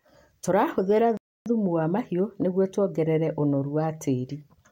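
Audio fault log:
1.17–1.46 s, playback stall: the speech cuts off mid-flow and the output drops to silence for about 287 ms before the audio resumes. A hard break of this length, rather than a click or a short dropout, points to the player being starved of data or having its output thread held up. The likely cause is a buffer underrun or blocked audio thread that briefly stopped samples reaching the device.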